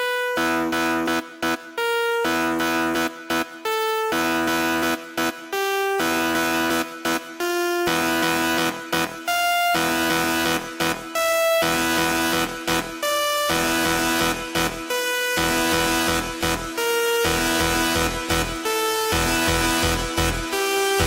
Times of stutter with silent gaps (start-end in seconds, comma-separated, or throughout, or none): none